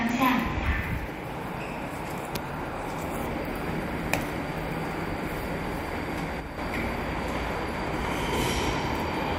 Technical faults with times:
6.40-6.58 one channel drops out

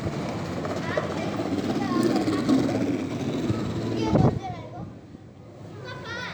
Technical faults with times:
none

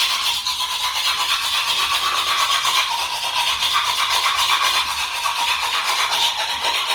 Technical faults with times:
0.00-6.94 Opus compression

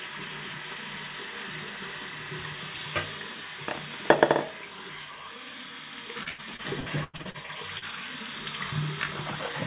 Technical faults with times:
6.23-7.85 repeated packet loss (robotic sound)

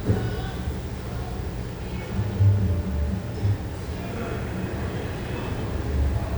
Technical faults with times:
none

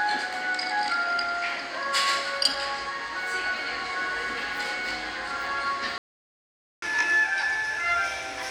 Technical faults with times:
5.98-6.82 playback stall
6.82-8.51 catch-up at higher speed

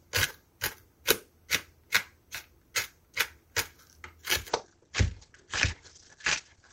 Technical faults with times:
4.49-6.72 call bitrate drop

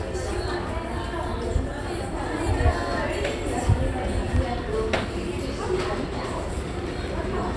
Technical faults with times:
none

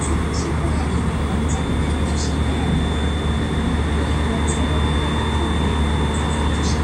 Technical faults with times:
1.41-6.83 feedback whistle

